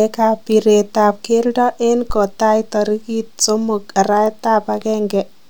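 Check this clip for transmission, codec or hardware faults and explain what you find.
One hardware fault is present. From 2.1 to 2.3 s there is a phantom power thump: a supply was switched on a live input, and the voltage step passed through the coupling capacitors. It is heard as a deep thump peaking at about −10 dBFS and dying away within roughly 44 ms.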